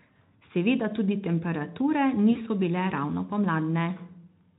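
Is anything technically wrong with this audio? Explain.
Yes. At 2.31 to 2.40 s, after "tudi temperature", VoIP packet loss concealed by the speech codec occurs. The decoder replays its last pitch for about 40 ms, giving a fading buzz or coloured noise before "bile ravno".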